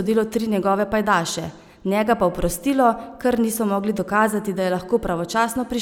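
Listening to this speech recording, nothing technical stood out as wrong at any point.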